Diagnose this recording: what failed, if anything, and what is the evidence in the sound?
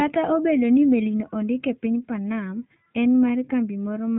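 The fault is at the codec stage: the whole speech clip went through the iLBC codec. A spectrogram shows a hard ceiling at 4 kHz throughout. The speech sounds plainly rough and synthetic because each frame's excitation is coded independently, consistent with the 15.2 kbps, 20 ms mode.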